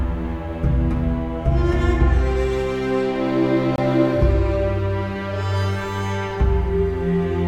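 A music clip with a gap between stream segments: mismatched segment timestamps leave about 22 ms unfilled, so a hard-edged silent hole cuts the music from 3.76 to 3.78 s, with no audio lost.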